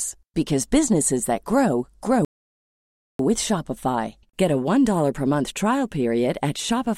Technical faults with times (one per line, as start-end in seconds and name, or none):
2.25-3.19 playback stall